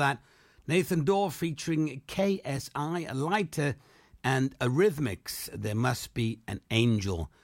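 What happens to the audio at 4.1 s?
At 4.1 s the speech continues intact, with no dropout, click, distortion or other fault at that point.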